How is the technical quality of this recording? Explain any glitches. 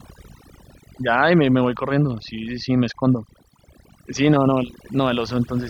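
The recording is compromised by overdone noise removal across its whole length. A noise reduction stage set too aggressively pulls individual frequency bands down or out whenever they sit near its noise estimate, taking quiet parts of the speech with them. The background drops and breaks up into twinkling specks.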